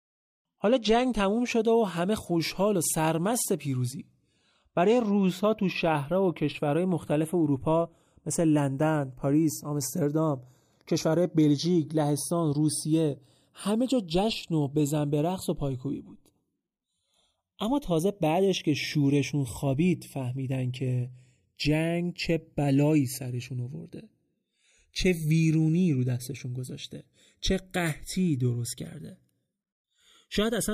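Throughout, the channels drift apart. Mismatched clocks, about 20 ppm off, slowly slide the delay between them. Summed to mono, sweeping comb notches sound like slow flanging.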